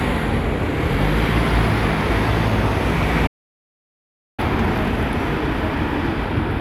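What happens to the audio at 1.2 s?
Nothing goes wrong at 1.2 s: the everyday sound carries on intact through that moment, with no dropout, click, distortion or other fault.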